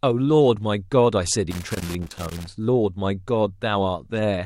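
It's a short speech clip, and from about 1.51 s to 2.47 s there's a burst of loose connector crackle, a bit under a second of irregular scratchy popping. That's the sound of a worn or dirty contact somewhere in the cable or jack shifting and momentarily losing touch, so the signal gets chopped on and off in quick, uneven bursts, and any DC sitting on the line turns each make-and-break into a little pop.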